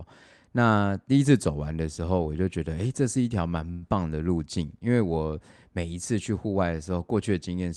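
Speech over a call path band-limited to about 12 kHz has a call audio freeze from 3.71 to 3.84 s: a short fading buzz or hiss fills the gap, likely from delayed packets draining the jitter buffer, then the speech resumes intact, about 0.1 s late.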